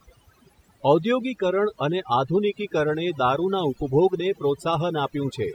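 From start to finish there's overdone noise removal: the reducer was pushed too hard, so any frequency band sitting near its noise estimate gets cut nearly to nothing, softer parts of the speech included. The background drops and breaks up into twinkly specks.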